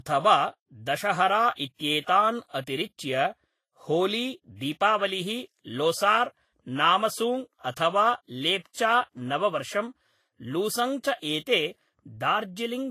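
Transcoding between lossy codecs runs throughout the speech. Nothing sounds above 14.2 kHz, and two layers of coding artefacts overlap. The likely cause is an MP3 encode near 64 kbit/s re-encoded as Vorbis near 29 kbit/s, which spends scarce bits on the first codec's damage.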